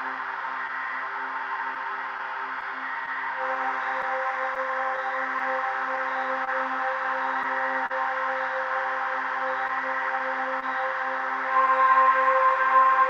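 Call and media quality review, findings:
Clock drift between sender and receiver, whole clip: small timing hiccups at uneven intervals throughout. Sender clock runs roughly 2% slow, so the jitter buffer keeps draining and the receiver stretches or repeats short pieces. Unlike packet loss, the hiccups never stop and are not confined to one stretch.

Scattered short gaps, 0.67–7.92 s and 9.68–11.69 s: brief smears and ticks, about fifteen in the first span (longest around 40 ms) and about four in the second (longest around 20 ms). Receiver concealment continues the last sound over lost or late packets. Unlike drift, these cluster in two bounded spans.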